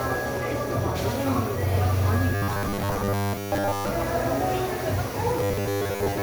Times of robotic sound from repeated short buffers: 2.35-3.92, 5.37-6.22

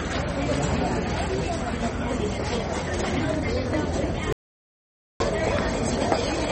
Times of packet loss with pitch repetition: none

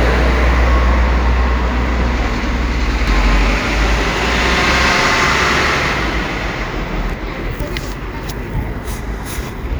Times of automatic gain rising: none

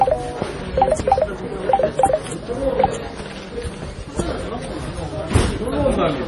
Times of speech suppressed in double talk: none

